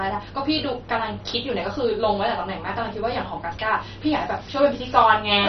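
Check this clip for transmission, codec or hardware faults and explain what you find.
There's one fault, MP2 compression, running the whole way through this speech: dull above about 6.1 kHz, gurgly and granular, likely a starved 32 kbps Layer II encode dropping upper sub-bands.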